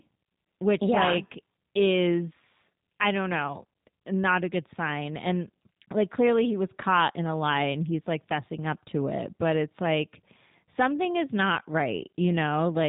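Throughout, the speech sounds rough and slightly synthetic, with nothing above 3.8 kHz. This is G.729 codec damage, which fits an 8 kbit/s low-rate speech coder.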